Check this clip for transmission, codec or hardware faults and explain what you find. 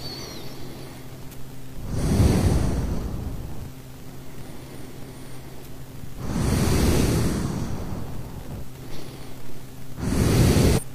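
Three short bursts of damaged data in a compressed stream occur at 2.28–2.33 s, 8.87–8.93 s and 10.73–10.81 s, each about 50 to 75 ms long. Corrupted bytes make the decoder misread those frames and lose sync until it finds the next valid frame header, so each spot is heard as a chirp, squawk or blip. A plain dropout would leave a gap of silence without the decoder losing sync.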